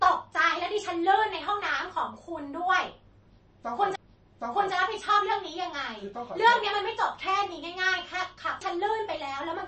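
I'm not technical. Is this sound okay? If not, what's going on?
No. The speech sounds dull and plainly watery, with nothing above 8.3 kHz. Likely cause: MP3 compression squeezed too hard, discarding the crisp treble.

There are two CD skips, at 3.96 s and 8.61 s. Each time there is a tiny tick and silence, then the sound carries on from a slightly different spot.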